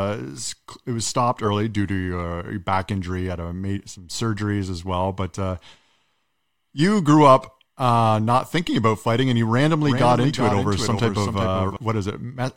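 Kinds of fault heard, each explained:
Doubled audio track: from 9.86 to 11.76 s, right after "about fighting and you", a full-band copy trails the original by roughly 0.4 s, around 5 dB quieter, with no room colour and abrupt edges, likely from a slower capture path or an out-of-step edit.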